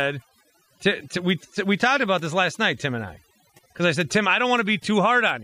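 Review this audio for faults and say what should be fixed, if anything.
Overdone noise removal runs throughout the speech. Bands near the noise estimate are cut away, leaving silent gaps with twinkling specks. Use gentler noise reduction settings.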